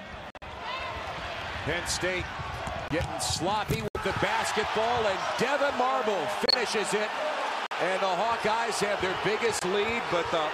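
Corrupt frames were muted at 0.30 s, 2.88 s, 3.88 s, 6.46 s, 7.66 s and 9.59 s: the decoder rejected damaged compressed frames and silence replaced them, creating abrupt dropouts of 0.04 to 0.13 s. On a waveform each shows as a flat hard-edged gap, and on a spectrogram as a full-height blank strip.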